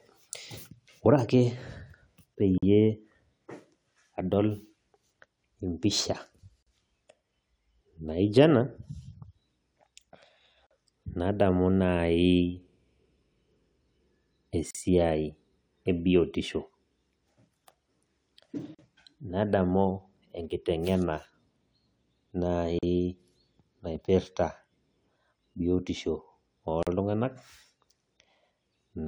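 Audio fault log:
2.58, 6.63, 10.67, 14.71, 18.75, 22.79 and 26.83 s, gap at a join of encoded pieces: separately encoded segments were butted together with their encoder start delay and end padding left in, so every 4 s the speech drops out for about 40 ms (47 ms at the first join), with softened edges.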